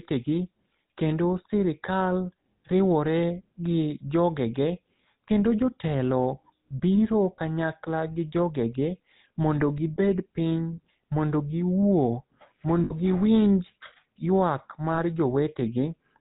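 Speech that sounds buzzy and gravelly throughout, with a band-limited, rasping edge and no air above 4 kHz. This is plainly audible GSM full-rate codec damage, consistent with the 13 kbps coder, which rebuilds the voice from a vocal-tract model excited by sparse, evenly spaced pulses. A brief rough, metallic ringing hold appears at 7.37 s, again from 12.84 to 12.93 s, and from 14.94 to 15.0 s. These are lost GSM frames, about 20, 60 and 40 ms long, where the decoder repeats the last good frame instead of passing new sound.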